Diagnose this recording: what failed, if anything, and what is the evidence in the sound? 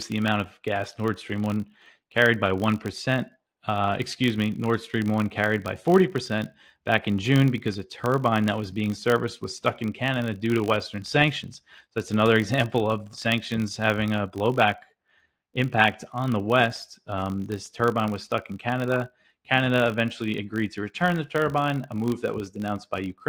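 A filter in the processing stage is restarted on every block. A buzz at 50 Hz runs through the whole speech clip and rises and falls with the talker's level. Each block starts from silence and leaves a small transient. The repeat rate points to blocks of 20 ms.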